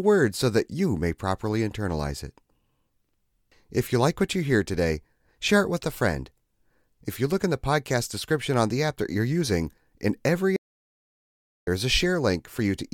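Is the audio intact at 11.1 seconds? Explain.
No. At 11.1 seconds the speech is inside an audio dropout to silence running from 10.56 to 11.67 s. For about 1.1 s the sound cuts to silence, with no room tone. The input was likely lost while recording continued writing silence.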